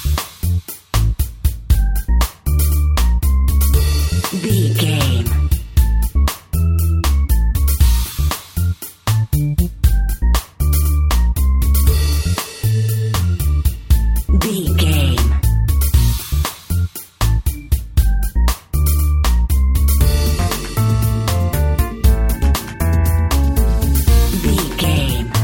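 Nothing in this one trips the ear: no dropouts, glitches or other technical faults turn up anywhere along the way, so there's nothing to report.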